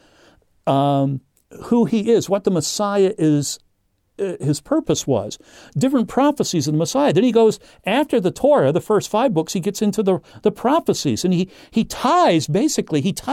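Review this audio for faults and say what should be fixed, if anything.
No faults heard; nothing to fix.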